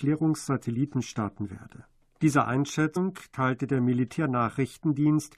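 Compressed frames skipped at 2.95 s, just before "teilte der": the speech jumps forward by about a tenth of a second, which fits roughly five missing frames of about 21.3 ms each. Because adjacent frames overlap, the join sounds like a brief smeared blip rather than a sharp click.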